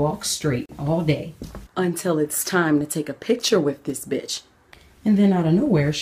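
At 0.66 s a gap at a join of encoded pieces cuts the sound for about 36 ms, ending at 0.69 s. Separately encoded segments were butted together untrimmed, leaving encoder delay and end padding as a brief silence with smeared edges before the sound resumes where it stopped.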